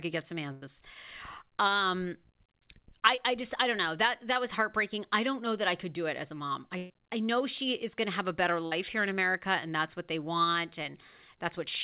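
A speech recording carried over a call path. It is band-limited to nothing above 4 kHz, which fits G.711 mu-law at 64 kbps. A burst of packet loss hits at 0.52 to 0.63 s, 6.77 to 6.92 s and 8.66 to 8.73 s. Roughly 100, 120 and 60 ms of audio are gone each time. The receiver stretches the last sound into a fading buzz or hiss, then jumps ahead. Short concealed packet loss occurs at 3.15 to 3.19 s and 4.33 to 4.37 s. About 20 ms of audio is lost each time. The gap is patched by continuing the preceding sound, so it comes through as a brief smear or wobble.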